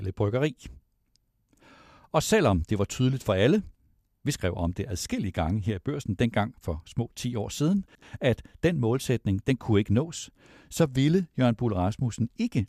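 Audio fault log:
7.88–8.02 s, frames out of order: after "år siden", two 72 ms blocks play swapped, so it flutters before "at den målsætning den".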